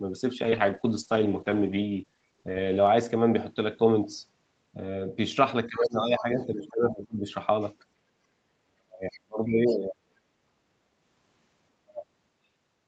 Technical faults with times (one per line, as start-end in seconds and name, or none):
0.45-2.97 call bitrate drop
5.67-7.25 speech suppressed in double talk
5.84-5.89 other side's voice leaking through
6.18-6.22 other side's voice leaking through
6.66-6.70 other side's voice leaking through
8.63-10.14 speech suppressed in double talk
9.12-9.20 other side's voice leaking through
11.84-12.06 speech suppressed in double talk